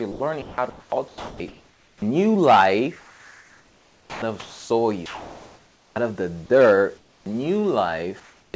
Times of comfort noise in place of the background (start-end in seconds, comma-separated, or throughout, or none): 5.06-5.96, 6.98-7.26, 8.20-8.54